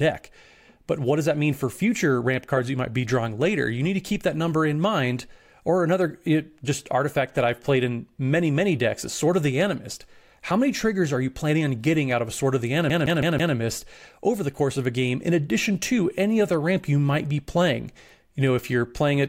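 At 12.90 s, right after "of the", the speech gets stuck like a CD stuck on one turn. A short slice of about 0.16 s plays four times in a row, until 13.55 s. Each repeat ends with a brief mute where the pickup jumps back. This is what happens when a scratch throws the laser back one track on every turn. The result is a quick, even, mechanical stutter.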